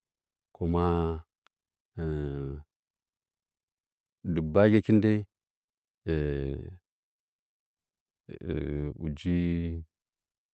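No technical faults are audible.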